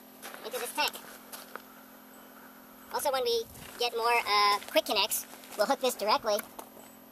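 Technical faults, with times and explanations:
Throughout: wrong sample rate. Everything runs 1.5 times too fast and sits about 7 semitones high, because audio captured at 32 kHz is being played back at 48 kHz with no conversion, so speed and pitch both jump by that same ratio.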